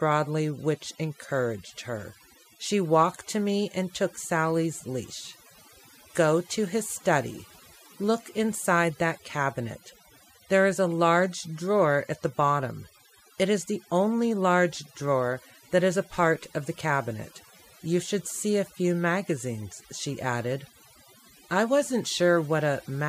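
From start to finish the speech carries overdone noise removal: an aggressive denoiser cuts individual frequency bands whenever they approach its noise estimate, taking soft speech detail too. Gaps sit near-silent with twinkling specks, and a spectrogram shows scattered isolated dots between sparse, holed harmonics.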